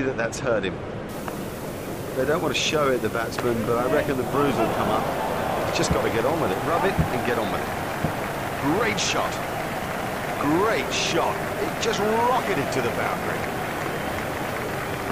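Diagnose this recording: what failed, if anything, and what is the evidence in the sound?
The failure sits in sample-format conversion: low bit depth with dither. From 1.09 s to the end, a constant, even hiss sits under the sound. It does not pump or follow the level, and nothing crunches or buzzes. The sound has been reduced to 6 bits, with dither added before rounding. That turns the rounding error into steady white noise rather than distortion. The hiss sits only about 20 dB below the signal.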